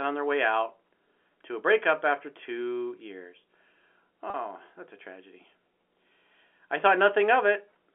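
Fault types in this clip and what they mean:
Packet loss with pitch repetition: 40 ms dropout at 4.30 s, bridged by looping the last pitch cycle, so the speech briefly hangs with a buzz.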